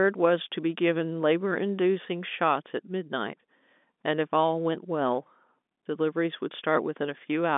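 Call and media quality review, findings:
No call or media quality findings; the speech carries the narrow band of G.711 telephone coding, with nothing above 3.8 kHz.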